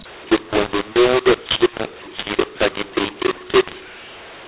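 From the first moment to the end, the speech carries a mu-law and A-law mix-up: it was encoded with G.711 A-law but decoded as mu-law. Because the two logarithmic curves disagree, sample levels are remapped wrongly, some inflated and others shrunk, giving a harsh, gritty distortion. On a waveform the pauses sit visibly above zero, filled with noise; a spectrogram shows broadband hash smeared across every frame, capped near 4 kHz, consistent with 8 kHz telephone coding.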